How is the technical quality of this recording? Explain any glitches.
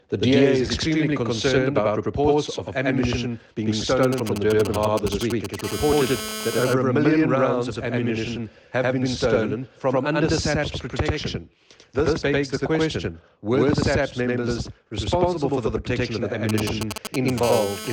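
The recording has three clear problems: a constant doubling throughout and two episodes of mobile-phone interference.

Channel delay (doubling): one channel runs about 93 ms late, consistent with a 4096-sample buffer, and the mono sum leaves an equal-level slap echo trailing everything.

GSM signalling bursts, 4.03–5.61 s and 16.49–17.30 s: a nearby 2G phone's intermittent radio bursts are rectified, giving galloping ticks and short 217 Hz buzzes a few dB below the signal.

GSM phone buzz, 5.64–6.65 s and 17.43–17.88 s: continuous 217 Hz transmission pulses become a hard, harmonic-rich rasp, about 7 dB and 9 dB below the signal respectively.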